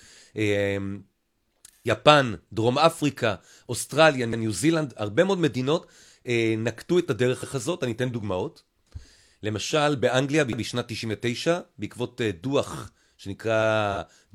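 From 1.73 to 1.91 s, AAC frame loss with concealment leaves a smeared, noisy patch where the decoder rebuilt about 128 ms, consistent with three lost frames.

Overlapping chunks then cause a stutter at 4.33, 7.43, 10.53 and 13.63 s. Each 3.0 s chunk starts early, so 100 ms plays twice at every join.

A second concealed AAC frame loss, 13.92 to 13.98 s, briefly smears about 43 ms, fitting one frame.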